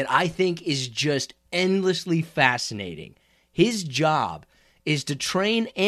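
No faults to report across the speech recording; nothing flagged.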